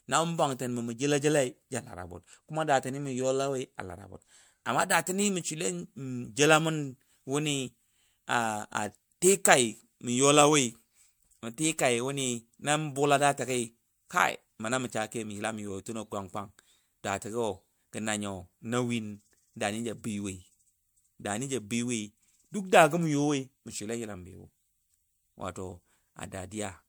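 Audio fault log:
Throughout: generation loss. The speech sounds swirly, smeared and hollow, and consonant attacks blur. The likely cause is about four rounds of MP3 re-encoding, fitting rates near 108 kbit/s. Each pass requantises on a shifted frame grid, so noise and spectral holes accumulate.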